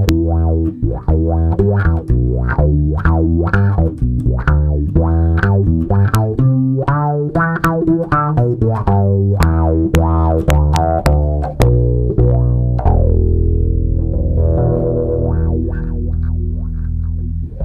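The audio has integer overflow: a sample sum just exceeding the integer limit wraps to the opposite sign rather than being held, giving sharp cracks at 0.09, 6.15, 7.65, 9.43, 9.95 and 11.62 s, plus a run from 10.50 to 11.06 s.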